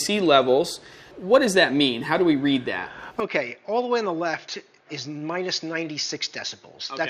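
At 3.2 s the sound abruptly turns duller and quieter, dropping by roughly 10 dB and losing everything above 6.9 kHz through to the end. The likely cause is the input switched to a poorer device, changing microphones with no silence at the join. What separates this from a simple gain drop or a low-pass filter is that level, tone and background change together in one step, with a new, very faint noise floor arriving at the same moment.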